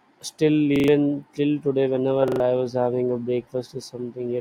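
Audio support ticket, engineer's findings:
Repeated buffer, twice. 0.76 to 0.88 s, just before "till today": a short stutter, the same 40 ms chunk played four times with hard joins, about a tenth of a second of real audio gone. Same again at 2.28 to 2.40 s, between "till today" and "I was having a". Playback side, the output buffer ran dry and the device replayed the last one. Smells like an underrun in the audio thread, sized around 40 ms.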